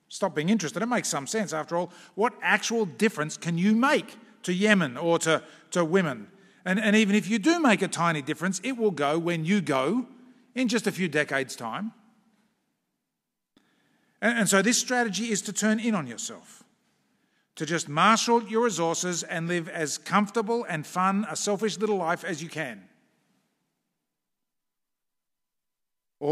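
Nothing in the signal of this speech recording stands out as a technical fault at any point.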